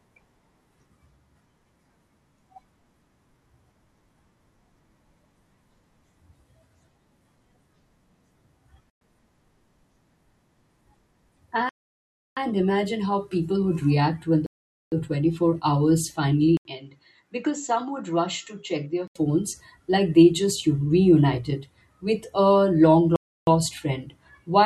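The speech drops to silence at 8.90 s for 113 ms, again from 11.69 to 12.37 s just before "imagine how people would", and from 14.46 to 14.92 s right after "people would react when". These are likely Bluetooth stalls: delayed packets emptied the headphones' buffer, and playback resumed once the retransmissions arrived.

From 16.57 to 19.16 s, an 80 ms gap marks an input likely switched to a poorer device. Nothing remains above 7.7 kHz, the level falls roughly 10 dB, and a new noise floor sits about 50 dB down, so the speech turns dull until the original input returns.

A final likely Bluetooth stall silences the speech from 23.16 to 23.47 s, a 312 ms gap.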